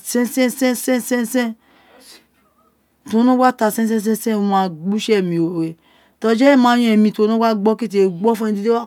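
No technical faults are audible.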